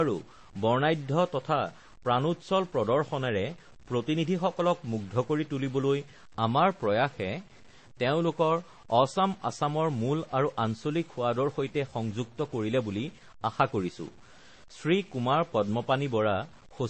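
Stuck bit, throughout this speech clip: a distortion rides on the sound, and the pauses are filled with a steady noise floor. This is likely one converter bit held fixed, so about half the samples sit off by that bit's value, including quiet passages.

Transcoding between lossy codecs, also throughout: nothing is present above 8.4 kHz, and artefacts of two different kinds are heard together. That fits a likely chain of low-rate MP3 followed by Vorbis, each encoder adding its own damage.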